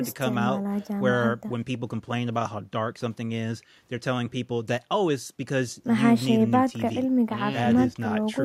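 No technical faults can be heard anywhere in this recording.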